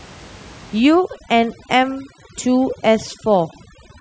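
Speech, with overdone noise removal from 0.80 s onward: over-strong band gating empties the background into twinkling specks, unlike steady low-pass dulling.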